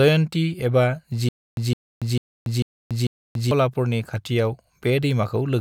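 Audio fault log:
1.29–3.51 s, stutter with silent gaps: a short burst of about 161 ms of the speech replays five times at a steady period of about 445 ms, each repeat followed by roughly 284 ms of digital silence. This is likely a stalled player or stream retrying delivery, replaying the last buffered fragment and then running empty before the next attempt. The audio that should have filled this span is missing.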